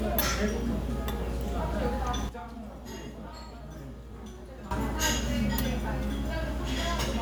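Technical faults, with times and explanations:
2.29–4.71 s, sudden gain jump: the sound and its background noise drop together by about 12 dB at 2.29 s and snap back up at 4.71 s, with no fade either way. This is likely a digital gain change applied instantly between samples instead of ramped.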